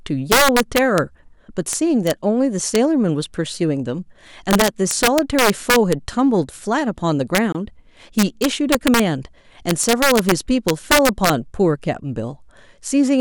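Integer overflow runs throughout: the gain pushes peaks about 4 dB past the largest integer, and instead of being limited they wrap to the opposite sign. Only a small fraction of samples cross the limit, but each flips across the full range, so the loudest moments of the speech carry violent cracks far sharper than clipping. At 7.52 s comes a gap at a join of encoded pieces, where separately encoded segments were stitched together without trimming the encoder's start-up delay and final-frame padding. A 23.5 ms gap, from 7.524 to 7.548 s, cuts into the continuous speech with smeared edges before the sound resumes where it stopped. The joins fall every 10 s.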